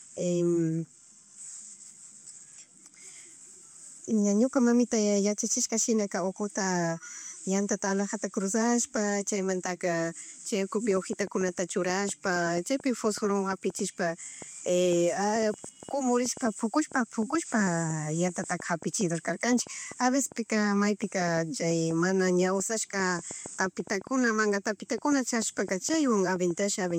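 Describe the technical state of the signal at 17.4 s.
At 17.4 s the speech sits inside a train of clicks. It begins at 10.91 s and runs to 26.92 s. Short pulses of much the same shape arrive about 4.75 times per second, at an uneven pace. There are around seventy in all. Their peaks stand a few decibels above the speech. They tick and pop over the speech and through the pauses. The likely cause is interference from nearby equipment or a faulty connection or power supply.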